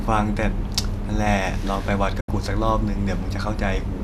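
At 2.20 s the speech drops out in a digital broadcast dropout: the receiver lost good frames and muted, with a quick fade of about 8 ms, leaving a hole of about 72 ms, which fits roughly three lost frames, before sound returns at 2.29 s.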